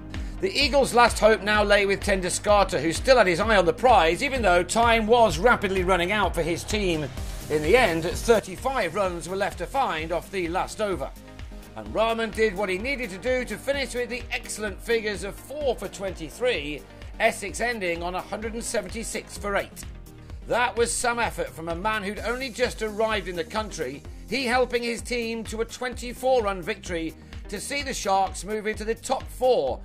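A sudden gain jump at 8.39 s drops the level by about 6 dB and holds it there for the rest of the clip. Between one sample and the next, the sound and its background noise fall together, with no fade or ramp to ease the transition. That shared step is the giveaway: the digital gain changed instantly, likely because a level setting or bit shift was applied directly to the signal rather than smoothed over time.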